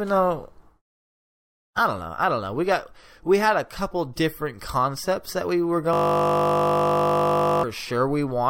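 From 5.93 to 7.63 s, a system hang loop replays one frozen 20 ms buffer as a 50 Hz buzz: identical repeating waveform cycles, evenly spaced spectrogram harmonics.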